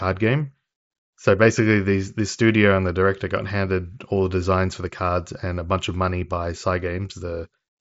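No technical faults can be heard in this speech, which arrives through a Bluetooth mSBC headset link with nothing above about 7.7 kHz, as expected for that wideband codec.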